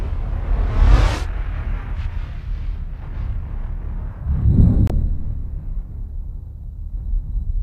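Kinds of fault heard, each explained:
Digital broadcast dropout: the receiver muted on a bad or missing frame. The sound cuts out from 4.87 to 4.90 s, fitting one lost frame.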